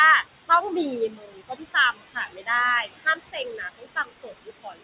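Throughout, the noise suppressor pulls down every band it judges to be steady room noise by about 17 dB, frame by frame. The background therefore sinks in pauses and swells under the speech. The narrowband call path, with nothing above 4 kHz, adds a muffled quality.

The suppressor also mistakes parts of the speech for noise and turns them down with the background. This happens from 1.09 to 1.76 s (about 18 dB, roughly half a second affected), 1.92 to 2.49 s (about 19 dB), 2.82 to 3.4 s (about 18 dB), and from 3.57 s to the end (about 20 dB). Soft consonants and word endings sound swallowed or faint there.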